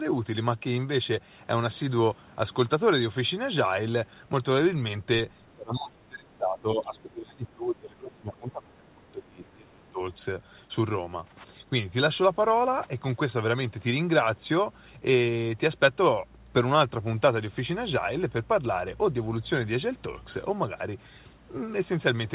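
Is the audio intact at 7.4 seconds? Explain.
No. From 5.51 to 10.0 s, an echo canceller likely mistook simultaneous talk from both ends for its own loudspeaker echo and turned everything down. This speech suppressed in double talk makes the speech around 7.4 s dip by as much as roughly 25 dB or break up in pieces.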